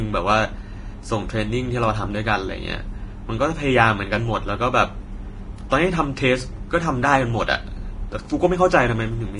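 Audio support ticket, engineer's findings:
Vorbis compression, throughout, 0 s to end. Speech hissy and grainy, vowels roughened, consonant onsets smeared. Nothing above 10.6 kHz. Likely cause: Vorbis encode at low quality. Treble residue quantised so coarsely that fine detail turns to noise of matching energy, with the cut-off pulled down. Heavy damage, consistent with a bitrate around 31 kbps.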